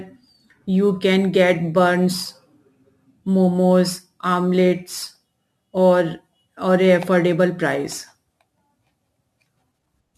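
From start to finish the speech carries crude rate conversion. It sounds like a move from 44.1 kHz to 48 kHz done by just repeating the nearest sample, with no filtering. That stair-steps the waveform in a pattern set by the two rates, throwing off tones unrelated to the voice. You hear it as a gritty, inharmonic fizz that rides along with louder and brighter syllables, sitting roughly 30 dB under the speech.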